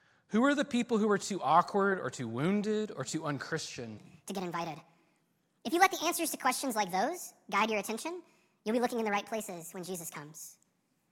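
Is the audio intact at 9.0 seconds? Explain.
No. At 9.0 seconds the speech falls inside a section at the wrong speed that runs from 3.98 s, just after "wounded or too unchristian", to the end. Playback there is 1.47 times too fast, likely from the segment being clocked at the wrong rate, so the speech turns hurried and high, up about seven semitones. Unlike a pure pitch shift, timing and pitch jump together, and the voice's resonances rise too, giving a squeaky, chipmunk quality.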